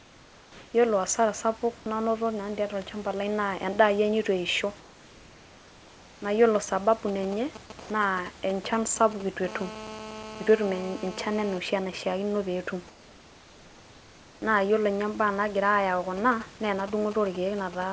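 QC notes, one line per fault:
0.00–0.74, 4.80–6.22, 7.80–7.90 and 12.88–14.42 s, comfort noise in place of the background: in the pauses the room background, about 24 to 27 dB below the loudest sound, turns into a smooth, steady hiss, about 2 to 3 dB quieter, except at 7.80 s, where it is about 2 dB louder. The likely cause is discontinuous transmission, with the receiver synthesising noise while the sender is silent. On a spectrogram the textured background becomes a uniform grey wash, and the waveform shows an even, featureless band.
7.08–9.46 and 16.17–17.93 s, GSM signalling bursts: a galloping dit-dit-dit of short raspy buzzes, at roughly 15 dB below the signal. A nearby 2G phone sends short groups of radio bursts at 217 Hz, and the audio circuitry rectifies them. The spectrogram shows stacked harmonic lines of 217 Hz in brief repeating clusters, and the waveform shows grouped spike trains.
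9.48–11.58 s, GSM phone buzz: a continuous, hard, raspy buzz at 217 Hz, about 14 dB below the signal and unrelated to it. A nearby 2G phone in a call transmits 217 bursts per second, and the audio circuit demodulates them. On a spectrogram it appears as an unbroken comb of evenly spaced harmonics, and on the waveform as a regular pulse pattern riding on the audio.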